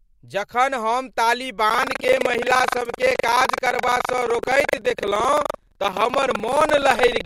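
From 1.66 s to the end, the speech carries buffer tearing: a steady robotic rattle at about 23.4 Hz, which fits a 2048-sample buffer. Writer and reader have slipped, so roughly a fifth of each period replays audio from about 150 ms earlier, with hard joins either side.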